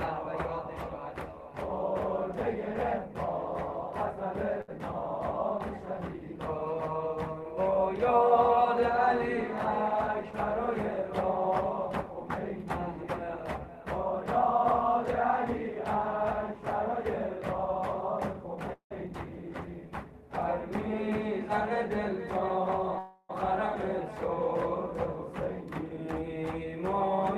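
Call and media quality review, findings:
Short stall from a late packet, 4.61 s: last sound held about 66 ms, then resumes from the same point. Jitter buffer underrun. Nothing lost, unlike packet loss concealment.

Call audio freezes, 18.73 to 18.93 s and 22.98 to 23.31 s: continuation fades, first one to about 100 ms of silence. Resumes in place with no content missing. Likely a jitter buffer underrun from delayed packets. Longer and emptier than the stall at 4.61 s.

Short concealed packet loss, 19.07 s: brief smear where about 40 ms of audio is gone, bridged by a few ms of extrapolation. Decoder concealment. Content actually missing, unlike the stall and freezes.

Jitter buffer speed-ups, 9.87 to 12.46 s, 20.93 to 22.81 s and 25.25 to 27.07 s: audio faster at unchanged pitch, rates of 102, 103 and 105 percent, the last one hurried. The buffer drains excess delay by repeatedly cutting pitch-period pieces, up to a tenth of a second per run. 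Unlike a resampling fault, there is no pitch shift.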